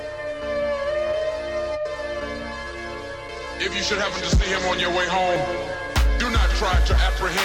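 At 5.36 s and again at 6.2 s the music jumps forward, losing about a tenth of a second and then a shorter piece, likely a dropped buffer (overrun). Unlike a dropout, no silent gap opens; the two sides are spliced straight together.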